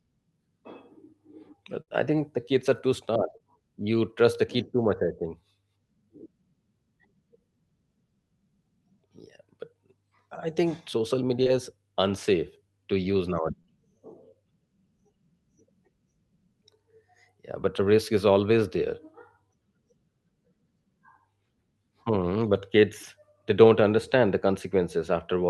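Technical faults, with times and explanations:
1.81–4.99 s, scattered short gaps: about three brief holes, roughly 100 ms in all and none longer than about 50 ms, each bridged by continuing the previous sound, leaving small ticks and smears.
11.43–11.48 s and 13.62–13.69 s, short concealed packet loss: after "I think social" a 20 ms hole, then two back-to-back 20 ms holes at 13.6 s, each filled by extending the preceding sound, giving a brief smear or wobble.
11.46–11.48 s and 23.03 s, lost packet rebuilt from error correction: one 20 ms packet each time, before "is unsafe to use" and before "they don't understand the", played from a low-bitrate Opus FEC copy, so there is no gap but the audio is momentarily rougher and noisier.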